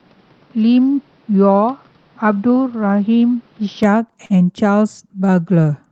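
From the start to 3.83 s, the speech sounds dull and boxy. Nothing reaches above 6 kHz. The level sits a few decibels lower. A faint noise floor lies well below the speech. At 3.83 s the sound opens up again, with no gap at the change. This points to an input switched to a poorer device, likely a different microphone or a headset's call profile. That device passes a narrower band and brings its own tone and noise.

At 4.25 s, a short stall from a late packet holds the sound too long. A packet arrived late, and the jitter buffer ran dry. The receiver stretched the last sound for 46 ms to cover the wait. It then resumed where it left off, so nothing is lost. The stretch ends by 4.32 s. It leaves a brief drag with a slight buzz or dip, and everything after runs 46 ms later.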